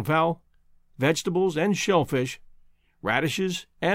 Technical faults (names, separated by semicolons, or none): none